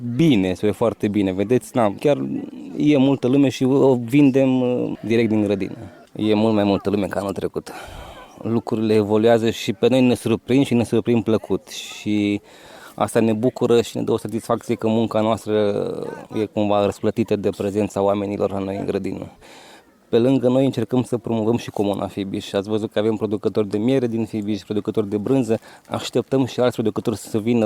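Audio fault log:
No faults can be heard in this clip. The log has no timed entries to list.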